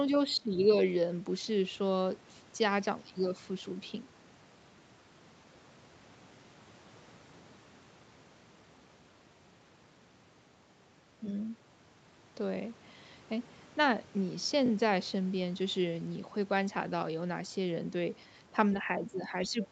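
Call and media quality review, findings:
Speech suppressed in double talk, 0.36–0.54 s: talker level dips roughly 20 dB, about 200 ms affected. Likely echo canceller misreading simultaneous near- and far-end activity as echo and attenuating the whole mic signal.
Speech suppressed in double talk, 18.76 s to end: shallower, sustained dip, roughly 10 dB. Likely the same suppressor clamping the talker while the far end is active.

Other side's voice leaking through, 19.06–19.11 s: short 50 ms scrap of a second voice, about 20 dB under the talker, within the suppressed tail. Likely residual loudspeaker echo the canceller did not subtract from the microphone path, landing while it was already unsettled by double talk.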